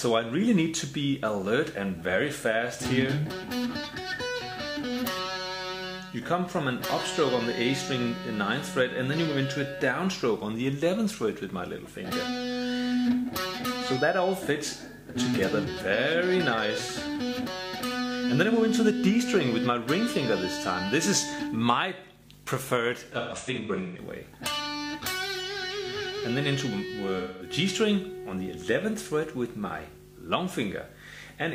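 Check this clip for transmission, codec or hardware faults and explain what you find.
Two stretches of AAC frame loss with concealment occur, at 23.18–23.98 s and 27.19–27.51 s. In the first, about half a second of data goes missing in runs up to roughly 150 ms. The second loses about 210 ms. The decoder patches these gaps from the last good spectrum, so they sound smeared and noisy rather than silent. That distinguishes them from plain dropouts.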